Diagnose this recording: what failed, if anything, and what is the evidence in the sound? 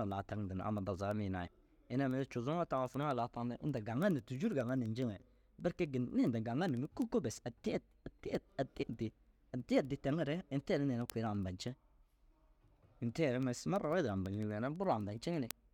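Word clock ticks run from 0.11 to 15.67 s, roughly every 70 ms: an unlocked digital-input receiver drifting about 300 ppm, slipping one sample each time.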